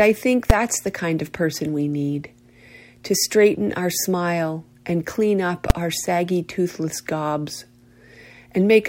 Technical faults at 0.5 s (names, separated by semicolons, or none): invalid numbers at full scale